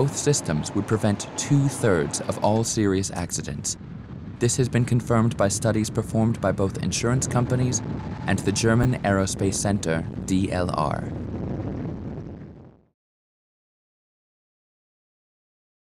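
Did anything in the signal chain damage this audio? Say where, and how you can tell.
Yes, chunks out of order at 8.83 to 8.85 s. A 10 ms block of audio arrived or was written one chunk late, at the buffer or network stage, so it plays after its successor. Nothing is lost, but the swapped order leaves three hard joins and a brief jumbled moment.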